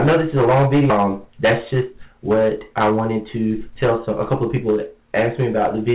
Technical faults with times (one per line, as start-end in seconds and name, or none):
0.00-5.95 hard clipping
0.90-0.92 skip ahead
2.90-3.69 jitter buffer speed-up
4.68-5.08 jitter buffer speed-up